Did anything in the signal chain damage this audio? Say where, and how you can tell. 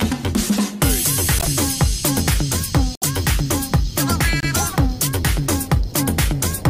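Yes. Repeated frames, from the codec or storage stage: at 1.37 s and 2.94 s a 26.1 ms block plays three times, fitting one compressed frame, and at 4.40 s a 104.5 ms stretch plays twice. Each repeat is heard as a stutter.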